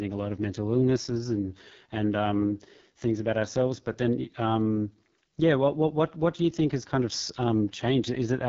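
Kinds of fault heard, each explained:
AMR wideband (HD Voice) codec: The speech sounds rough and raspy throughout, with a gritty buzz riding on vowels and consonants, and nothing is heard above 7.5 kHz. The codec rebuilds speech below 6.4 kHz from a pulse-excited vocal tract model and fills the top band with shaped noise. Damage this heavy fits its lowest 6.6 kbit/s mode, where too few bits describe the pulses and the voice turns coarse.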